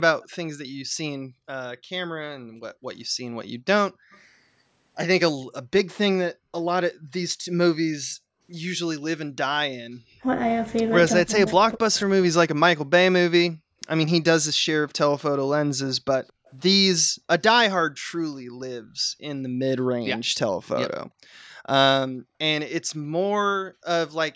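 At 0.21 s and 4.11 s, and again from 16.27 to 16.51 s, a very faint copy of the speech returns 219 ms late. This is likely an echo leak from a far-end loudspeaker. Unlike reverberation, it is a distinct delayed repeat. At 10.21 s the speech dips briefly by about 10 dB, and between 11.21 and 12.33 s it drops deeply for about half a second in total. That is likely speech suppressed in double talk, where the talker's own voice is cut rather than echoed. From 17.04 to 17.23 s the room sound itself falls by about 40 dB, then recovers. This is background gated by the echo canceller, affecting ambience rather than speech.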